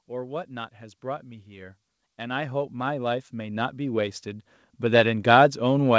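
From 0.06 s to 5.33 s, automatic gain rising: the gain control judged the input too quiet and kept raising its gain, by about 18 dB in total. Voice and background noise swell together, with nothing above 8 kHz, which points to a G.722 call codec.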